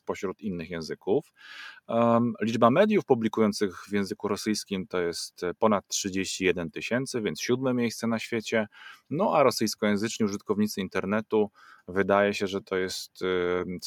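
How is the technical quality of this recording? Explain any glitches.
No technical faults can be heard in this speech recording. There are no glitches to explain.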